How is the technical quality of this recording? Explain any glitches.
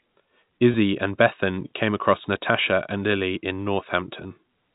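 One short glitch stands out in the speech, over a telephone-band sound with nothing above 4 kHz that is typical of G.711 coding.

From 0.72 to 0.74 s there is packet loss with pitch repetition. The sound briefly holds with a slight buzz for about 20 ms. A missing stretch, which fits one lost 20 ms packet, was filled by repeating the last pitch period instead of leaving silence.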